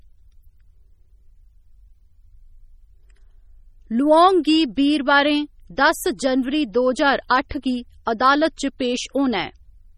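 MP3 compression throughout this speech leaves heavy watery, swirling artefacts and smeared attacks, likely from weak frequency lines dropping in and out, which fits about 32 kbps.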